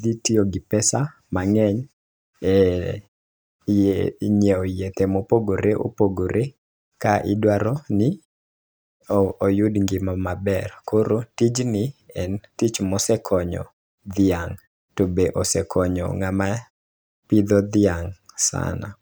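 No faults found in this speech recording; the background dropping to silence in the gaps between phrases is expected behaviour, and no speech is lost.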